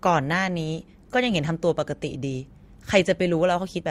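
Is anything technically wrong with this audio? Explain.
No, the speech signal shows nothing technically wrong at any point in the recording.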